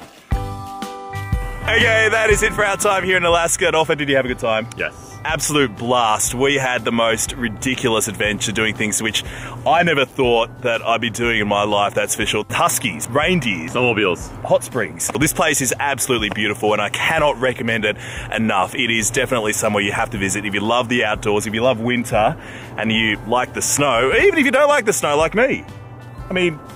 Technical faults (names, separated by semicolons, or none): none